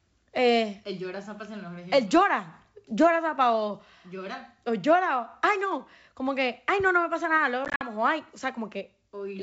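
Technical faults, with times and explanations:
7.65 to 7.86 s, packet loss on an ADPCM call: after "me pasa nada luego", 100 ms of sound vanishes in hard-edged gaps over 160 ms, the longest 50 ms. The decoder's predictor and step size drift from the sender's, so the sound returns slightly distorted.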